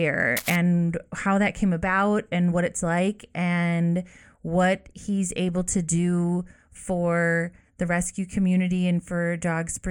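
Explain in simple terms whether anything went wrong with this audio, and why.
Cable scratch noise, 0.37 to 0.56 s, before "how that came about": a scratchy rustle, likely from a worn connector being moved so its contact flickered.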